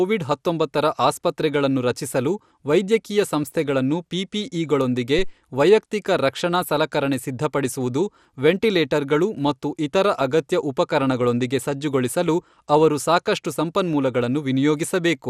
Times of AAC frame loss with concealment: none

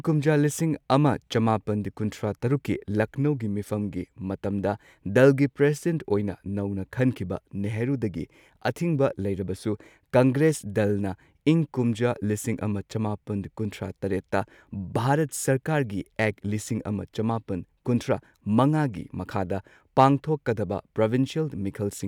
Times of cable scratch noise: none

